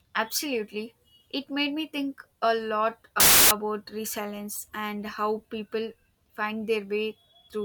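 Speech, broken from 3.2 to 3.51 s by file tags played as audio: an embedded cover picture, being compressed data, is read as samples and bursts out as very loud white noise with hard edges. Unlike clipping or a codec glitch, the static is flat and unrelated to the speech.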